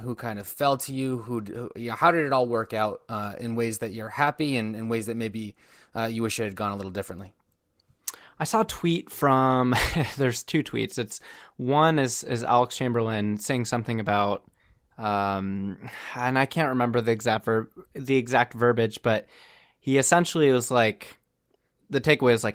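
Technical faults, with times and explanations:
Nothing in this speech counts as a technical fault; it's simply been through Opus voice compression doing its ordinary job.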